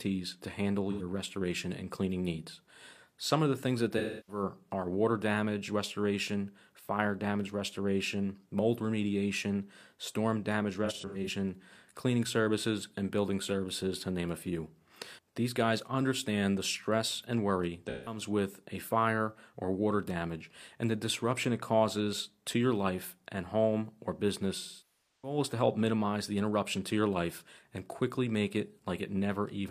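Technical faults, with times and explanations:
0.91–1.01 s, 3.98–4.43 s, 10.85–11.30 s, 17.89–18.21 s, 24.58–25.38 s: AAC frame loss with concealment. The decoder rebuilds missing frames from the last good spectrum, so short gaps sound smeared and phasey; at 10.85 they're scattered, and the 640 ms loss at 24.58 decays toward silence, then fades back.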